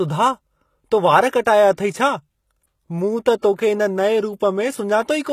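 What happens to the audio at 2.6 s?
At 2.6 s the speech carries the same damage heard across the whole clip: sibilants sound gritty and lispy, likely HE-AAC compression at a rate near 20 kbps. Spectral band replication copies lower bands upward, so the treble stays bright rather than dulled, yet its harmonics sound synthetic and metallic.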